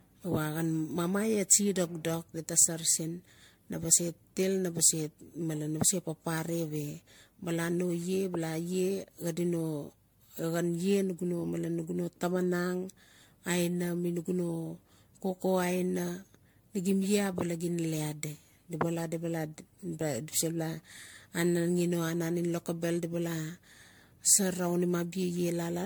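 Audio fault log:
Throughout: generation loss. The speech sounds more swirly, smeared and hollow than a single MP3 pass near 96 kbit/s would explain, with blurred consonant attacks and content stopping at about 19.9 kHz. The likely cause is roughly ten successive decode and re-encode cycles through MP3. Each cycle requantises the signal on a shifted frame grid, so quantisation noise and spectral holes build up with every generation instead of staying at one encoder's level.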